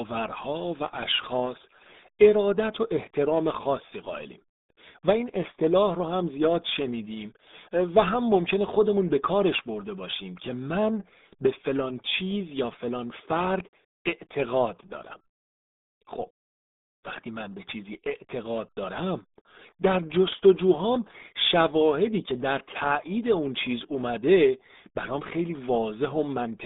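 From start to finish the speech sounds muffled and gargly, with nothing above 3.8 kHz: heavy RealAudio 14.4 codec damage, which fits an 8 kbit/s stream.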